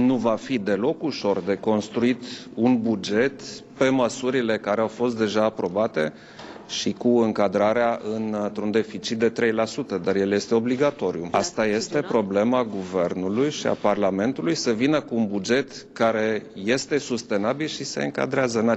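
No technical faults can be heard anywhere in the signal.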